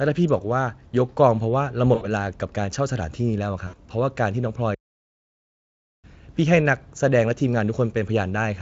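VoIP packet loss concealed by the speech codec hits this speech recording at 1.95–2.06 s and again at 3.67–3.77 s. Each time about 60 ms of audio, consistent with three 20 ms frames, went missing, and the decoder filled the gap by extending its last pitch and filter while fading them, leaving a brief buzzy or noisy, smeared patch. A playback stall follows at 4.74–6.04 s, where the sound cuts out mid-flow for about 1.3 s before resuming, likely because the player ran short of data or was briefly blocked. The Speex coding underneath, at what sounds like a fairly high setting near 34 kbps, leaves little or no audible damage of its own.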